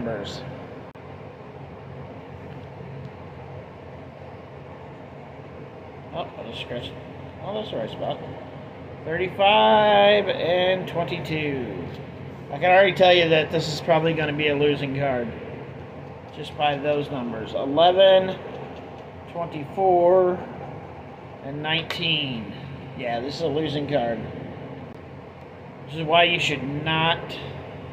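A CD skip hits at 0.91 to 0.95 s, and again at 24.93 s. Each time the laser lost its place on the spiral and landed on another turn. The sound cuts out for a tick, about 30 ms first and roughly half that later, then resumes elsewhere.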